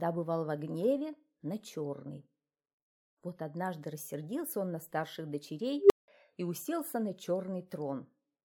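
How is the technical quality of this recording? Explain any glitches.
The recording has one clear glitch, an unstable filter, from 5.79 to 6.08 s. A recursive filter stage ran away with its own feedback: a tone of around 400 Hz swells to clipping in about 110 ms, then the overflowing values collapse into roughly 180 ms of silence before the filter resets. Acoustic feedback howl builds more gradually and keeps sounding, but here the sudden dropout right after the squeal marks a digital filter failure.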